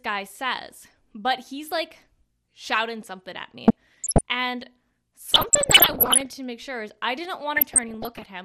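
MP2 compression runs through the whole clip: the speech sounds dull and gurgly, likely from MPEG Layer II coding at a low rate near 80 kbps, which starves upper sub-bands of bits.

DAB burbling appears from 3.68 to 4.21 s, 5.29 to 6.29 s and 7.55 to 8.24 s. Bit errors slipping past correction put wrong samples into single sub-bands, producing short blips of noise, worst in the middle burst.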